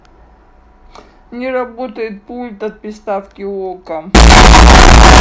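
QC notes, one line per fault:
4.15–5.20 s, signed and unsigned mixed up: very loud, harsh distortion where quiet parts are as loud as peaks, likely from a sign misread flipping each 16-bit sample's top bit.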